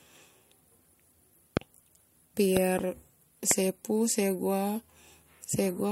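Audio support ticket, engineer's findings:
Loud pops in the speech at 1.57–1.59 s, 2.57–2.81 s (a double pop) and 3.51–3.53 s, peaking around 15–20 dB over the speech, which carries on underneath. Likely a voltage spike from a connector, switch, static or driver glitch, shaped by downstream circuitry.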